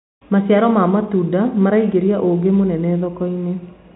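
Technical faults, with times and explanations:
No technical faults: the speech sits on a G.711 telephone channel, with nothing above 3.9 kHz and at most a faint level-following quantisation noise from that coding.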